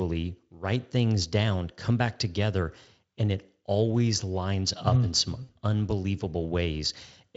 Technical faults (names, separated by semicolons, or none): VoIP packet loss concealed by the speech codec